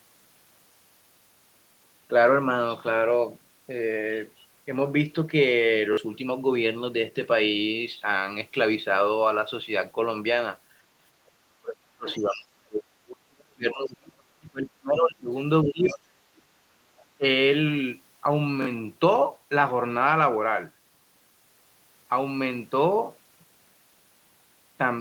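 At 5.93 to 5.97 s the speech stutters: one short fragment plays three times in a row, with a hard seam at each restart. This is a repeated buffer. Fresh audio did not reach the output in time, so the device replayed its last block twice more. Each repeat lasts about 21 ms, which fits a 1024-sample buffer, and roughly 40 ms of the real signal is skipped.

From 11.25 to 12.89 s the talker's voice sinks and breaks up, falling by as much as about 40 dB. This is speech suppressed in double talk, likely caused by both ends speaking at once: the echo canceller could not separate the local voice from loudspeaker echo, so it ducked everything. Inside that stretch, at 12.09 to 12.19 s, a faint scrap of the other side's voice leaking through can be heard, about 20 dB under the speech. That second voice was likely played on the talker's loudspeaker, reached the microphone, and was not fully removed.

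The suppression comes back at 13.07 to 15.31 s, dipping by about 35 dB. It returns more lightly at 15.64 to 16.05 s and at 17.17 to 17.24 s, each down by about 20 dB.

Fragments of the far voice also slip through at 15.88 to 15.95 s, about 25 dB down, at 16.37 to 16.42 s, about 40 dB down, and at 16.99 to 17.05 s, about 35 dB down.

At 18.62 to 18.67 s the same triple-play stutter from a repeated 1024-sample buffer returns, again losing about 40 ms.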